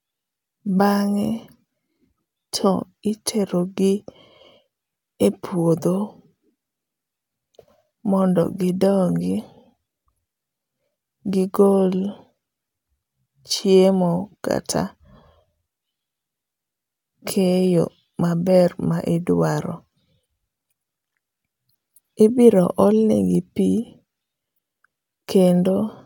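No technical faults can be heard in the speech at any point.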